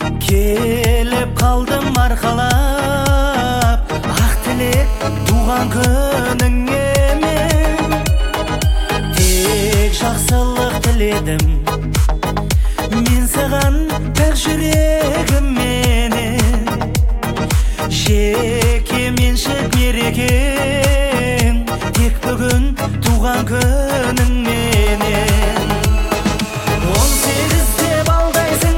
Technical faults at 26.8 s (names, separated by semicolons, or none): GSM phone buzz